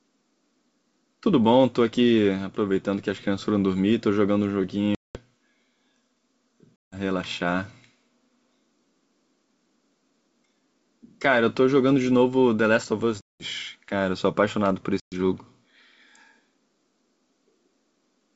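Packet loss on an ADPCM call cuts silent holes at 4.95–5.20, 6.83–6.95, 13.21–13.43 and 15.00–15.15 s. The waveform drops flat and the spectrogram shows blank columns. Afterwards the decoder's predictor and step size disagree with the sender's, so the wideband sound re-enters slightly distorted, settling within tens of milliseconds.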